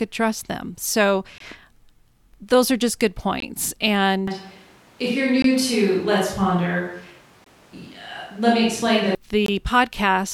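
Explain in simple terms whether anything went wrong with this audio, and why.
Two things went wrong with this speech recording.

The first is a gap between chunks. There are very short, hard-edged holes of silence, each lasting 20 ms, at 1.38, 3.40, 5.42, 7.44 and 9.46 s. They come exactly every 2 s, and no speech is lost, which sets them apart from random dropouts. This happens when audio is delivered in 2-second pieces and a small pause is left at each join.

The second happens from 4.28 s to 9.15 s. The speech suddenly turns roomy and hollow, with less bass and some faint background noise, then snaps back. This is likely a switch to a distant microphone, such as a camera's built-in one, taking over from the close one. The loudness stays about the same, so it doesn't sound like someone simply moving away. What gives it away is the abrupt change in sound quality at both ends.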